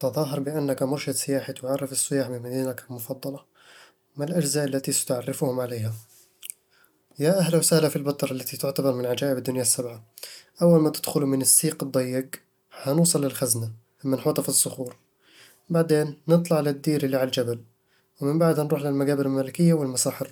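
No technical faults can be heard anywhere in this speech clip. Nothing in the audio calls for comment at any point.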